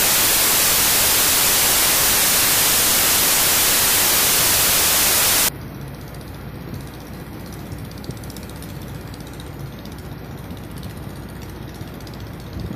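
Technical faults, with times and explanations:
0.0–5.49 s, wrong sample width: packed 24-bit data read as 16-bit samples, so most values mix mismatched bytes and only some keep the real top bits. Loud noise buries the sound, which plays at 0.667× speed and lower pitch. A byte-order error keeps the speed unchanged.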